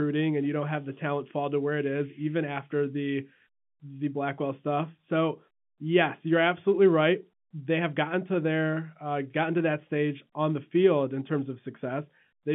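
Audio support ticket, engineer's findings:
No faults found in this speech clip. Band-limited telephone sound, roughly 150 Hz to 3.4 kHz, consistent with G.711 telephone coding at 64 kbps, with at most a faint level-following quantisation noise.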